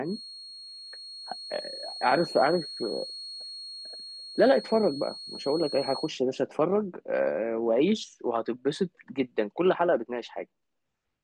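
From the start to 6.15 s the speech carries a feedback whistle, a thin, steady 4.3 kHz tone about 15 dB below the voice, likely from a speaker-to-microphone loop held just short of runaway. A spectrogram shows one faint horizontal line ending at 6.15 s.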